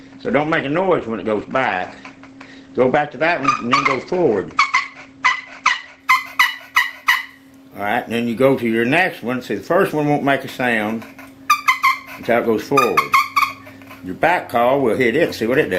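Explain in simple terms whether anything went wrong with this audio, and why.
For the first 6 seconds the sound is dull and smeared, with the crisp top end missing: nothing above about 8.6 kHz comes through. At 6.0 s it suddenly becomes clearer and fuller, with no gap or pause. This is an adaptive stream starting at a low bitrate. To begin playing quickly, the player first fetched a smaller, heavily squeezed version of the audio, then switched to a better one once it had checked the connection speed.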